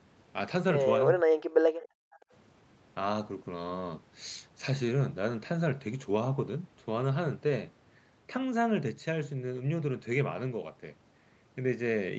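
From 1.16 to 1.43 s the speech sinks sharply, by roughly 40 dB, and breaks up for about a third of a second. This is speech suppressed in double talk. Both ends were likely talking at once, and the echo canceller, unable to tell local speech from loudspeaker echo, turned everything down.

Between 1.71 and 2.31 s the room sound drops away by about 40 dB for roughly half a second, then returns. This is background gated by the echo canceller. While the loudspeaker was active, the canceller clamped the microphone hard and released it once playback eased.

Inside that gated stretch, faint scraps of speech arrive 410 ms late, at 1.81–1.87 s and again at 2.13–2.23 s. They sit far below the main speech, the second scrap quieter still. This is echo leak. The remote end was likely on a loudspeaker, and its canceller let part of the pickup back down the line. The call's microphone processing band-limits the whole clip to nothing above 8 kHz.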